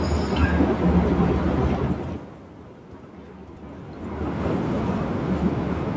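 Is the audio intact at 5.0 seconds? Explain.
Yes, the speech at 5.0 seconds is intact, with no technical fault at that moment.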